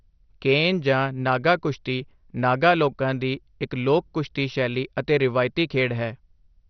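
From start to finish the speech is dull, with nothing above about 6.1 kHz. The upper range flickers in and out, and what remains has a gurgling, granular edge. This is likely MP2 compression. MPEG Layer II divides the sound into 32 equal sub-bands and shares out bits among them. Starved of bits, it shuts off the top bands and quantises the rest coarsely. The damage is heavy, which points to a low rate around 48 kbps.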